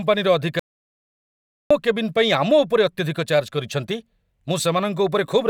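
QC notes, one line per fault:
0.59–1.71 s, audio dropout to silence: the speech cuts off mid-flow and about 1.1 s of silence follows, with no room tone, before the speech resumes abruptly. The input was likely lost, through a disconnect, failed link or stray mute, while the recorder kept writing silence.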